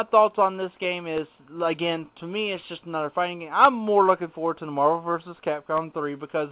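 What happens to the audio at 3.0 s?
Nothing goes wrong at 3.0 s: the audio there is intact, carried through the call path as a telephone-band signal with nothing above 4 kHz, which fits a G.711 A-law codec.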